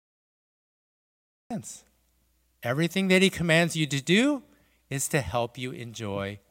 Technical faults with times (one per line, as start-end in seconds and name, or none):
0.00-1.51 cut-off start